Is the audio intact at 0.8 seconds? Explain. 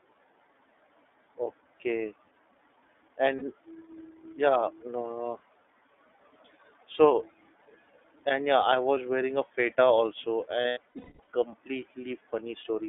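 No. At 0.8 seconds, as across the whole clip, the speech has been through the iLBC codec. It codes each 30 ms frame's excitation independently, at a rate that fits its lower 13.33 kbps mode, inside a telephone band of 300 Hz to 3.6 kHz. So the voice sounds thin and boxy, with nothing above 3.6 kHz and little low body, and the frame-by-frame modelling leaves a plainly audible rough, slightly synthetic texture.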